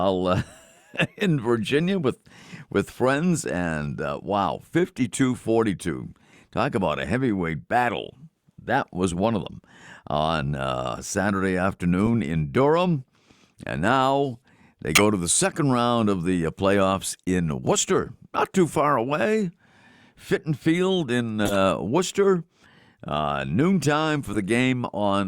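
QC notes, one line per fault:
12.06–12.10 s, corrupt frame decoded: a short chirp, roughly two damaged frames played as if valid, so the energy lands at the wrong frequencies. It peaks around -15 dBFS.
14.93–15.03 s, corrupt frame decoded: a few bad frames give a harsh burst, the loudest of the set.
21.44–21.56 s, corrupt frame decoded: a longer squeak across several frames, peaking about -5 dBFS.
24.33–24.36 s, corrupt frame decoded: a blip, around -20 dBFS.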